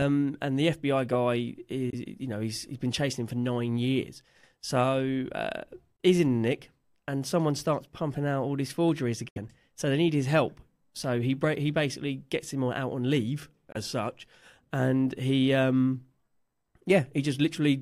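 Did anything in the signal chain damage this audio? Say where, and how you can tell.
Yes. The damage is at playback, most likely a Bluetooth dropout on the wireless link. The speech cuts to silence four times with abrupt edges: at 1.90 to 1.94 s, 5.96 to 6.00 s, 9.29 to 9.38 s, and 13.72 to 13.76 s. Three holes last about 23 ms, which fits one lost packet. The 9.29 s hole lasts about 70 ms, which fits three lost in a row. After each gap the speech resumes as if it had kept playing.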